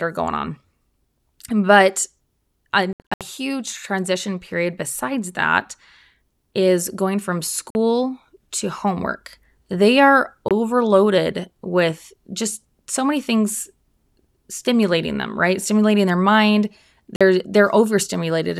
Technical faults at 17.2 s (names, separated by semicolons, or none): Bluetooth dropout